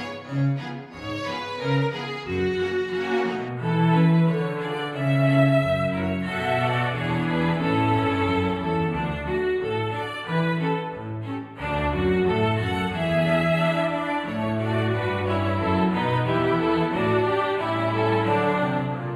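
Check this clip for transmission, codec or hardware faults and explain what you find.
One fault is present. From 3.49 s to the end, a channel delay (comb filtering) appears: one channel runs about 0.1 ms late, roughly a few samples. Summed to mono, it cancels evenly spaced frequencies from around 5 kHz upward, leaving the top end hollow and dull.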